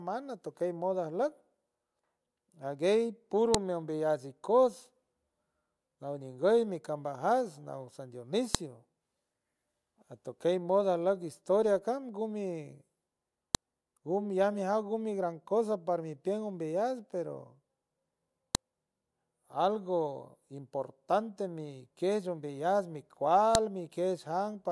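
At 3.54, 8.55, 13.55, 18.55 and 23.55 s, sharp clicks interrupt the speech every 5 s. This is a file header played as audio. Header bytes at each joined piece's start are heard as samples.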